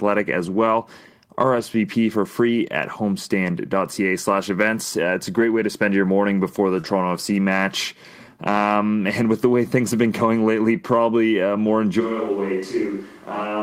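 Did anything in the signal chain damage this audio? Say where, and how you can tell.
Yes. The network dropped packets three times, and the decoder covered all three of them with Opus in-band forward error correction. At 1.55 to 1.61 s, just before "for free at", two lost packets came back as about 40 ms of low-bitrate copy. It happened again at 5.35 to 5.41 s, between "it's a" and "way to spend your". The third was a single packet at 6.83 to 6.85 s, after "your morning before the". Each of these lost packets rebuilt from error correction sounds rougher and noisier than the speech around it.

The third drop was also a short concealed packet loss. From 6.81 to 6.85 s about 20 ms never arrived in time. The receiver filled the gap by extending the preceding sound and then blended back into the real audio, so the speech smears or wobbles there. It sits right against the rebuilt frame at 6.83 s.

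From 12.02 s to the end, the capture likely changed to a more distant microphone, probably a camera or room pickup, after the close mic's feed dropped out. The change is abrupt. The speech becomes roomy and hollow and loses its low end. The level falls by about 5 dB, and room noise rises to about 30 dB below the speech.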